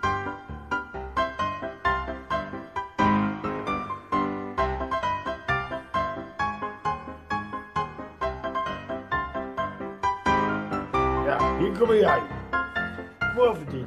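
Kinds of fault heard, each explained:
No technical fault can be heard anywhere in the clip. Nothing in the audio calls for a line of its own.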